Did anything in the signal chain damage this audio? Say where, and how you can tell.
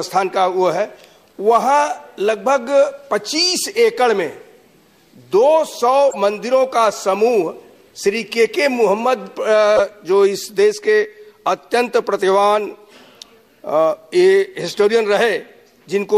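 Yes. Corrupt frame decoded, at 6.09 to 6.16 s, 9.76 to 9.80 s and 14.68 to 14.74 s: three brief chirp-like bursts unrelated to the surrounding sound. This is a codec-stage fault. Flipped bits in compressed frames were decoded instead of concealed, so misread gains and codes put energy in the wrong bands for each damaged frame. The first burst spans a few frames at about -20 dBFS, the second one frame near full scale, the third about two frames near -15 dBFS.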